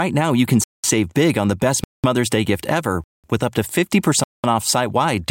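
At 0.64 to 0.84 s, right after "now you can" and before "big on the best", the speech stops dead for 200 ms, then resumes exactly where it left off. The same gap between chunks recurs at 1.84, 3.04 (between "gift ever" and "with up to") and 4.24 s, before "off site". Each hole after the first falls after 1 s of sound, so a late-starting player or codec padding is likely inserting silence at every join. Unlike a dropout, no speech is missing.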